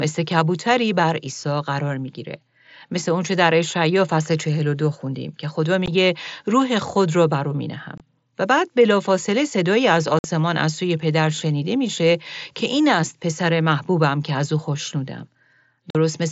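Abrupt holes break up the speech four times: a brief dropout at 5.86 s, a slightly longer gap from 7.98 to 8.00 s, the longest cut from 10.19 to 10.24 s (about 52 ms), and another from 15.90 to 15.95 s. These are unconcealed Bluetooth headset packet loss. Short voice packets on the wideband mSBC link between headset and phone never arrived, and nothing filled in for them, so the speech simply stops and restarts with sharp edges.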